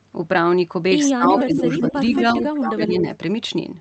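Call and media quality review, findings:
Speech suppressed in double talk, 1.06–1.63 s and 1.8–3.08 s. Level drops up to about 20 dB. Likely echo canceller ducking its own talker along with the loudspeaker echo during overlap.

Echo leak, 1.38–1.57 s and 1.78–2.45 s. Delayed copy 165 ms behind, about 5 dB under speech. Likely residual from a loudspeaker-side echo canceller, heard through the 8 kHz Opus band.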